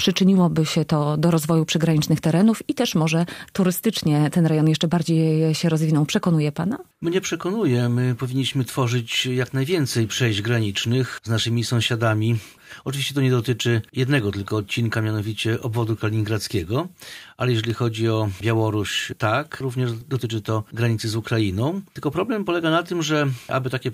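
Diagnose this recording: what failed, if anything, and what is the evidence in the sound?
A single loud pop at 17.70 to 17.72 s, most likely a voltage step in the analogue wiring (a plug, switch or static discharge). The sound continues underneath it. On the waveform, it is one sharp spike standing a few dB above the signal. On the spectrogram, it is a thin full-band vertical stripe.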